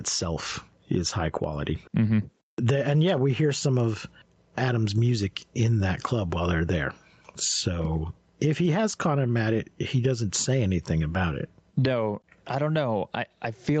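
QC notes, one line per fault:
throughout, gain pumping: the gain swings about 15 dB, pulled down under each loud sound and squashing loud and soft parts closer in level, likely a fast limiter taming far-too-high gain.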